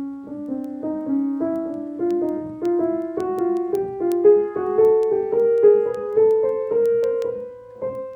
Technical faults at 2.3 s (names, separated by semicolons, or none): doubled audio track; word clock ticks